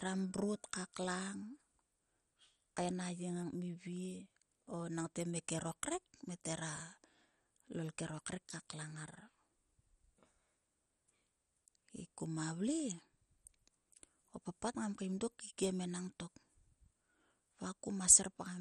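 Throughout, the speech sounds dull, gurgling and granular, with nothing above 13.9 kHz. The likely cause is heavy MP2 compression, which fits a 56 kbps rate.

From 0.06 s to 18.55 s, periodic USB or driver dropouts tick every 0.125 s. Each skips a fraction of a millisecond of audio, giving roughly 150 regular ticks.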